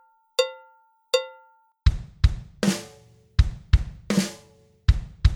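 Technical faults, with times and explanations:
1.72–5.35 s, sudden gain jump: the sound and its background noise drop together by about 11 dB at once. This likely comes from a gain change applied without a ramp.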